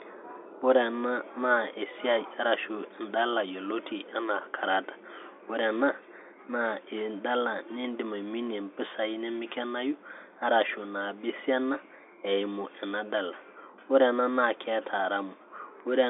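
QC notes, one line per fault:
No faults found in the speech. The G.711 telephone coding is audible as a narrow line band from 300 Hz to 3.6 kHz, with nothing above 3.7 kHz, which fits a 64 kbps mu-law telephone line.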